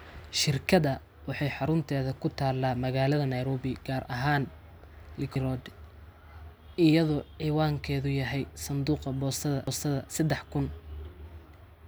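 At 5.35 s the speech is broken by a CD skip: the player mutes for roughly 5 ms, leaving a tick, then resumes from a different turn of the disc's spiral, so the speech jumps abruptly. A second CD skip at 9.67 s does the same with a shorter gap of a few milliseconds. On a waveform each shows as a brief flat gap with a hard edge, and on a spectrogram as a thin vertical line where the harmonic pattern fails to continue.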